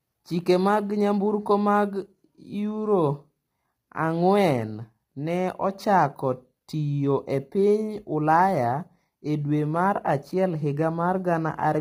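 Low-delay AAC compression runs throughout this speech: the voice sounds rough and grainy, with noise between harmonics, likely from short codec frames starved at roughly 24 kbps.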